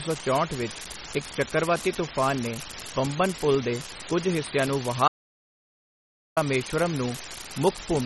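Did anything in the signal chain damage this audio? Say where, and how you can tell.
Yes. At the converter's digital output, one marginal data line flips a bit at random, leaving a steady, uniform crackle that runs through the whole clip, pauses included.

At the codec stage, the sound is watery and swirly with nothing above 11.8 kHz, most likely from MP3 compression at a low bitrate near 32 kbps.

At capture, an audio dropout to silence runs from 5.08 to 6.37 s, about 1.29 s of silence with no room tone, most likely from a lost input.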